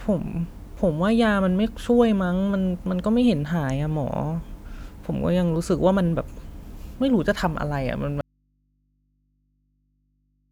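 Speech clip with an audio dropout to a faint residue at 8.21 s: it cuts abruptly to mains hum, roughly 45 dB down, right through the end, likely an open input.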